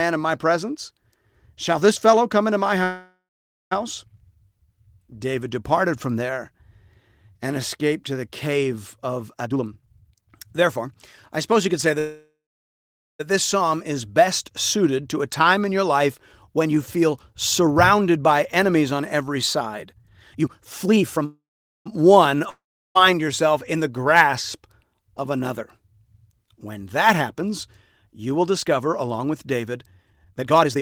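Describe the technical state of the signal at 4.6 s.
The signal is intact at 4.6 s, with no audible fault at that point in the speech.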